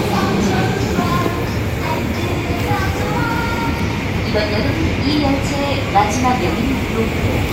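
No dropouts, clicks, distortion or timing errors turn up anywhere in the audio.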